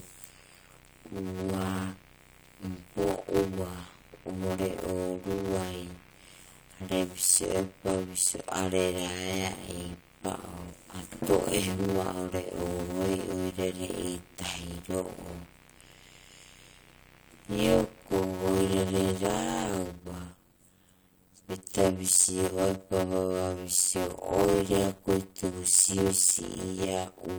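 From start to finish the speech runs at just over half speed (0.533×) at roughly normal pitch, with a buzz at 91.9 Hz. This is a padded block size mismatch: each block arrives short and is topped up with silence, which fits 256-sample writes into 480-sample reads.

From 0 to 19.41 s a steady, raspy mains buzz sits well below the speech, built on 60 Hz and its harmonics. Sharp switching spikes at twice the mains frequency, from a dimmer, rectifier or unshielded lead, are getting into the signal path.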